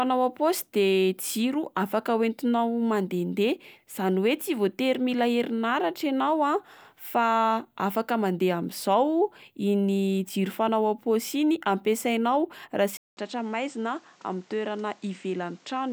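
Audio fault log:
12.97 to 15.92 s, input switched to a poorer device: after a gap of about 200 ms the speech turns duller and a little quieter, down about 5 dB, with nothing above 8.6 kHz and a new noise floor roughly 30 dB below it. This is likely a change of input to another, narrower microphone.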